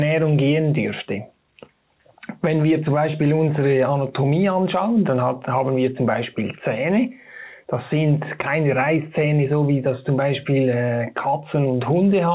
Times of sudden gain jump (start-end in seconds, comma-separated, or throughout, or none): none